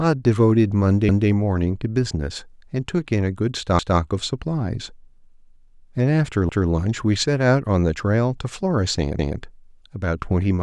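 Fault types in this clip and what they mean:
Overlapping chunks: the speech arrives in blocks of about 2.5 s, each starting 200 ms before the last ended, so a short piece replays at every join, every 2.7 s from 1.09 s. Unlike a dropout, nothing is lost. The sound stutters by repeating itself.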